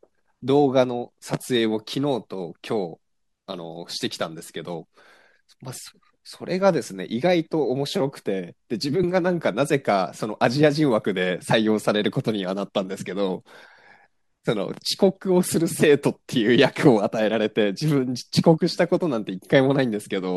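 At 9.03 s and again at 15.01 s, there is an overlap between stream segments: two segments' timestamps overlap, so the player trims genuine speech, removing roughly 10 to 15 ms. The waveform jumps, producing a brief click or skip. The 6-second spacing fits 6-second segments.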